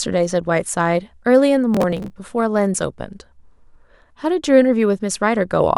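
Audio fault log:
1.74 to 2.16 s, processor overload crackle: a gritty tearing runs across the speech for about 0.4 s. The processor fell behind and missed a few dozen deadlines again and again on very short buffers, around 1.5 ms each. Each missed buffer was skipped, so the sound jumps with a hard edge every time. On a waveform this shows as a cluster of abrupt steps and breaks. On a spectrogram it appears as dense, thin vertical broadband streaks that stop at 2.16 s.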